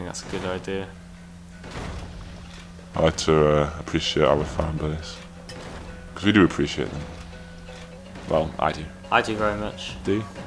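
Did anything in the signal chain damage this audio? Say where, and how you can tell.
Yes. A wrong sample rate runs from 0.0 s to 7.98 s, introduced at the playback stage where the clock driving the converter was mismatched to the material. Everything in that stretch is slowed to about 0.92 times its proper speed and sits roughly 1.5 semitones flat, with tempo and pitch dropping together. That ratio fits audio captured at 24 kHz being clocked out at 22 kHz with no resampling, so each sample simply lasts longer than intended.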